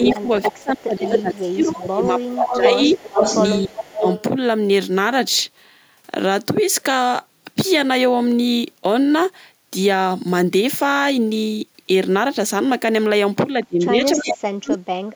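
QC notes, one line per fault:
0.00–2.79 s, speech suppressed in double talk: the voice dips by roughly 20 dB across about two seconds, likely the echo canceller ducking it while the far side spoke.
0.02–1.35 s, echo leak: a copy of the voice trails by 285 ms at about equal level, likely loudspeaker pickup the far-end canceller failed to remove.
1.71–4.23 s, echo leak: a delayed copy returns 380 ms behind, about 5 dB below the voice, likely residual loudspeaker echo passed back uncancelled.
3.64–4.06 s, speech suppressed in double talk: a brief dip of about 25 dB lasting roughly 300 ms, likely suppression triggered by double talk.
13.55–15.15 s, speech suppressed in double talk: the voice drops by as much as 40 dB over about one and a half seconds, likely the canceller muting during double talk.
14.71–14.76 s, echo leak: a faint scrap of echo 380 ms late, about 20 dB down, likely a small remnant slipping past the canceller.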